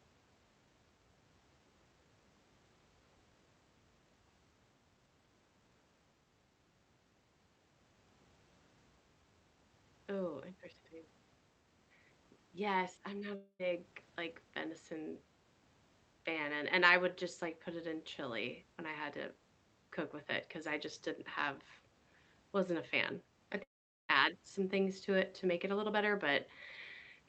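At 13.35 s the speech cuts out for about a quarter second, with a fading buzzy tail of the last sound before "like venison" resumes. At 23.63 s, after "wasn't a fan I", it happens again for nearly half a second, and most of that gap is dead silence before "some things to it". Both sound like a long network dropout, likely: packets never arrived, the receiver smeared out what it had, then gave up. The call path's Opus coding, with highs stopping at 8 kHz, can be heard throughout.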